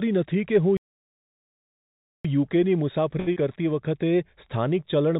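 From 0.77 to 2.25 s the speech halts in a playback stall, about 1.48 s of dead silence and a flat waveform, likely because the player ran dry or its thread blocked.

At 3.20 to 3.29 s a short stall from a late packet holds the last sound for 70 ms, seen as repeated, smeared spectrogram frames, before resuming without loss.

At 3.33 to 3.38 s short concealed packet loss fills 30 ms of a 60 ms gap with extrapolated sound, giving a brief smear, visible as a blurred patch. Across the call path, the spectrogram shows nothing above 4 kHz, consistent with a G.711 mu-law codec.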